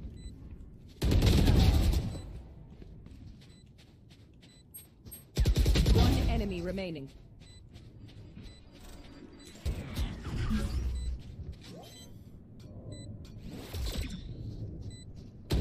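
Compressed frames skipped: whole frames were lost or rejected by the decoder, so playback jumps ahead by about 20 ms at 6.97 s, about 70 ms from 9.02 to 9.04 s, and about 50 ms at 11.54 s.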